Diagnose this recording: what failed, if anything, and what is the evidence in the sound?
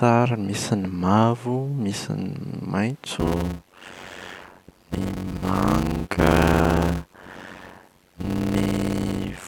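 A block size mismatch (padded) in the driver or buffer stage begins at 3.19 s and lasts to the end: a 91.9 Hz buzz, speech slowed to 0.533× at normal pitch. That fits 256-sample writes zero-padded into roughly 480-sample reads. The waveform shows regular silent gaps, and the spectrogram shows vertical stripes at 91.9 Hz.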